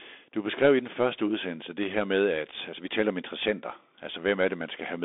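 It's a short speech clip that sounds like it went through a Bluetooth CVSD headset codec for its whole length. The band sits at roughly 250 Hz to 3.6 kHz with nothing above 3.8 kHz, and the codec damage is plainly audible: a granular hiss under the speech, scratchy s sounds, and distortion where loud high content outruns the adaptive one-bit step size. That all fits a 64 kbps CVSD link.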